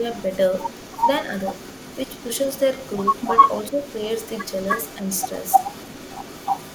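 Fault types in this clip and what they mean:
Echo leak: a distinct copy of the speech returns about 306 ms late and only a few dB quieter, most likely from a loudspeaker echo canceller leaking, unlike diffuse room reverberation.
Speech suppressed in double talk: from 3.70 to 3.74 s the speech dips by a few dB rather than going silent, most likely the echo canceller ducking overlapping talk, not a packet dropout.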